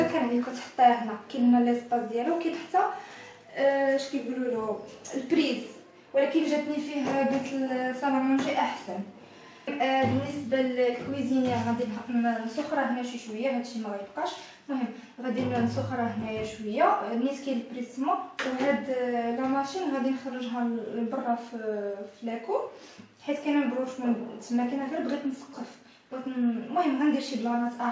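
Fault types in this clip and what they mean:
No fault can be heard anywhere in the audio. It has passed through a WebRTC call path whose codec keeps nothing above 8 kHz, which fits G.722 wideband coding at around 64 kbps.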